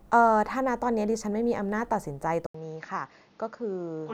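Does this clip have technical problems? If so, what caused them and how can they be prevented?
Yes. At 2.46 s there's an 80 ms dropout, then the speech goes dull, a bit quieter and slightly noisier, with nothing above 6.9 kHz. The likely cause is that the input switched to a poorer device. To prevent it, pin the recording to one fixed microphone and stop the system from swapping inputs mid-take.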